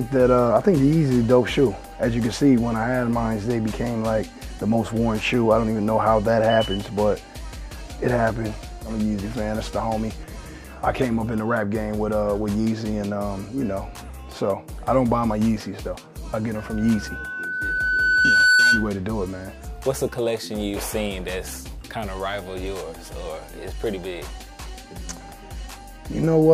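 Loudspeaker feedback squeal from 16.56 to 18.93 s: a runaway mic–speaker loop swells a 1.5 kHz tone to about 10 dB above the sound, a bright horizontal spectrogram line.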